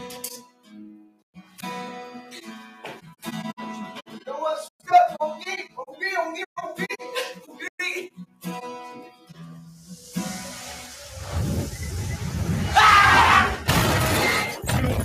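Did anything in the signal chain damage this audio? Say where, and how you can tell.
Yes. The damage happens at the call-processing stage, where a noise suppressor built for speech was left active on this sound. Throughout the clip, the level swings by something like 10 dB. Attacks come through intact, but sustained parts and decays sink, so the audio pumps and thins. An AGC or compressor reacts to overall loudness. This gain follows how steady or noise-like the material is, which is what identifies a noise suppressor applied to sounds it wasn't designed for.

Several passages suffer deeper sound cut by the noise suppressor: 0.37–1.58 s (about 17 dB down), 2.70–3.22 s (about 15 dB), 4.06–4.27 s (about 12 dB), 5.65–5.95 s (about 13 dB), 7.36–7.60 s (about 10 dB), 8.09–8.45 s (about 16 dB), 9.04–9.38 s (about 11 dB) and 9.67–10.07 s (about 7 dB). Unlike dropouts, the signal never vanishes. 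Held tones and tails are pulled down or cut short while their onsets survive.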